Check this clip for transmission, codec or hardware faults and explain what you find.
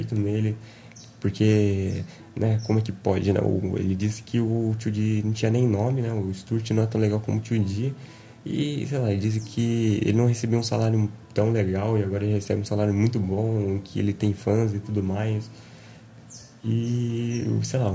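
No transmission, codec or hardware faults are audible here.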